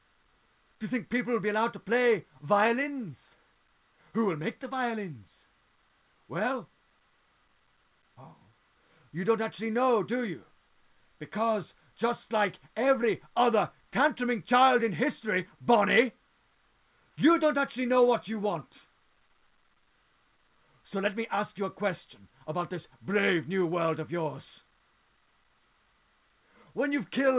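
No technical faults can be heard anywhere in the audio. It has come through a working WebRTC call path, and nothing reaches above 4 kHz, a narrowband ceiling that fits a G.711 A-law link at 64 kbps.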